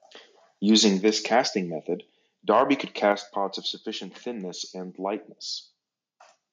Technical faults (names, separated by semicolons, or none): microphone volume stepped down